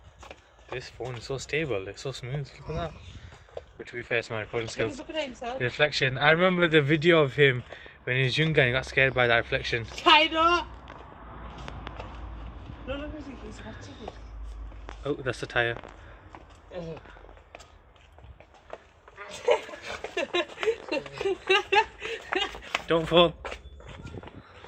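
From 3.79 to 6.81 s there is a call bitrate drop. The encoder got far fewer bits and coded more coarsely. The top end shrinks from 20 kHz to 8 kHz. The sound turns muffled and rough, which fits 128 kbps falling to about 9 kbps.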